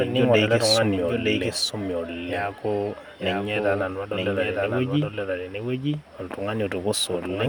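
Most likely, the speech was captured a second time through a slower path, or an edit left two copies out of step. The result is a doubled audio track that runs for the whole clip: a full-band duplicate trails the original by about a second, roughly 5 dB quieter. Because it carries no decay or room colour, it sounds like a clean repeat of everything a beat late rather than an echo.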